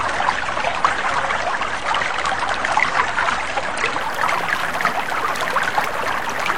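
The player began this everyday-sound recording on a low-bitrate rendition, an adaptive stream starting at a low bitrate, consistent with roughly 32 kbit/s AAC. From 0.0 to 4.0 s nothing above 9.9 kHz survives and codec artefacts are heavier, before quality jumps seamlessly to what suggests a 96 kbit/s version.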